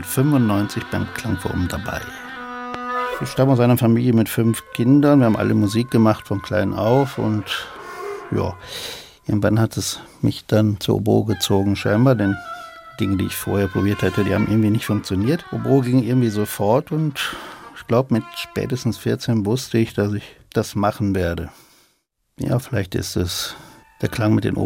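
A sudden voltage step entering the signal chain, likely from a plug, a switch or static discharge, produces a single loud pop from 2.74 to 2.77 s. The downstream circuitry shapes that brief pulse into a sharp, percussive burst peaking around 15 dB above the surrounding audio, so it jumps out abruptly. It lasts only about 20 ms, and the sound continues underneath it without interruption, with the pop simply superimposed on top.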